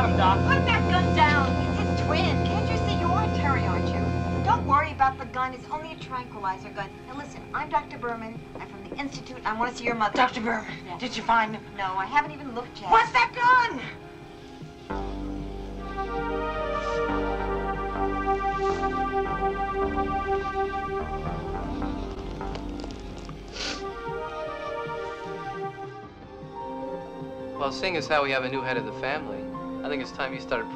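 Repeated frames at 22.14 to 22.22 s: a block of about 78.4 ms of audio plays, then plays again immediately, giving a brief stutter where the same fraction of a second is heard twice in a row. A short run of compressed frames was written or delivered a second time, and the decoder faithfully played both copies. The span fits three consecutive frames, and the duplicate lengthens the audio by 78.4 ms.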